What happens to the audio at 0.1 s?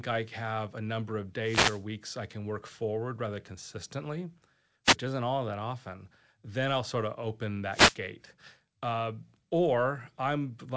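Nothing goes wrong at 0.1 s: the speech there is intact, carried cleanly through the call path, with the band-limited sound of a wideband call codec that has nothing above 8 kHz.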